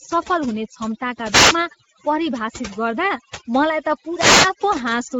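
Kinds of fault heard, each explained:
Overdone noise removal: a noise reduction stage set far too aggressively treats any frequency band sitting close to its noise estimate as noise and pulls it down hard, taking low-level parts of the speech with it. Throughout this clip the background drops and breaks up into twinkling specks, while the voice has its softer detail stripped along with the noise it was meant to remove.
Speex codec: a CELP speech codec of the kind used in older VoIP and game chat, here working at a rate that fits roughly 16.8 kbps, where the excitation signal gets too few bits to model the voice faithfully. The damage is plainly audible across the whole clip: the speech has a noisy, hoarse grain. The upper band is filled with shaped noise rather than real detail, and nothing remains above about 7.7 kHz.
Wireless microphone noise hit: an analogue FM radio link fading briefly as reflected signals cancel at the receiver, letting receiver noise rise up over the audio. 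Two such hits occur here, from 1.28 to 1.58 s and from 4.02 to 4.65 s, each heard as a short swish or burst of static laid across the voice. The second lasts about twice as long as the first.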